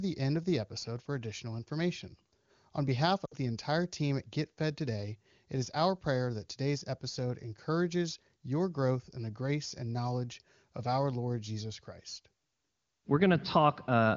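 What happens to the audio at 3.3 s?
From 3.25 to 3.36 s the speech is hit by lost AMR speech frames, just before "the entire team at". Radio errors left a short run of frames, about 60 ms, which fits three 20 ms frames, that the decoder could not use. The AMR-WB decoder fills the gap by repeating its last good pitch and vocal tract settings at falling gain. The result is a smeared, held-over sound that fades quickly, and the speech resumes briefly weak or rough.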